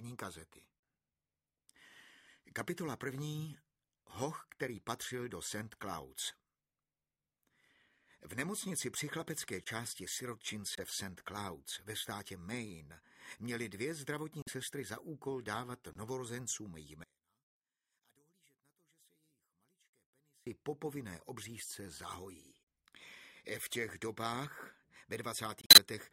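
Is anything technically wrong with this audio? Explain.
Yes. Two kinds of fault are audible.

Corrupt frame muted: the sound drops to silence at 9.64, 10.75, 14.42, 15.93 and 25.61 s. The gaps last from about 37 ms to 164 ms. Damaged compressed frames were rejected by the decoder and replaced with silence. Each hole starts abruptly, and the timing holds steady.

One channel inverted: from 17.04 to 20.47 s the level falls by about 33 dB and the sound turns faint. One stereo channel likely has reversed polarity. Summed to mono, the material common to both channels cancels, leaving only their difference.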